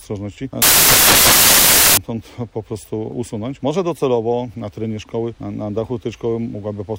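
Between 0.62 and 1.97 s, the samples are built from the wrong bytes: the reader assembles each sample with its bytes misaligned or in swapped order, so the rapidly fluctuating low-order bits end up as the most significant part of every value. For those 1.35 seconds the sound is replaced by loud, harsh broadband noise, before normal playback returns.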